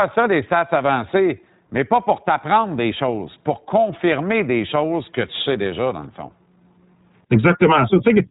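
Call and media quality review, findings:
iLBC codec, whole clip, 0 to 8.3 s. Band-limited speech, nothing above 3.8 kHz, dull and boxy. Rough, slightly synthetic texture, plainly audible. Probable component: narrowband VoIP codec. Each frame's excitation coded independently, granularity fitting 20 ms frames and a rate near 15.2 kbps.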